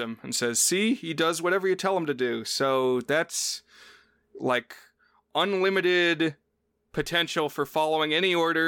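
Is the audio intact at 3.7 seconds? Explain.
Yes, the speech at 3.7 seconds plays through cleanly, with no dropout, click, distortion or other fault to be heard at that moment.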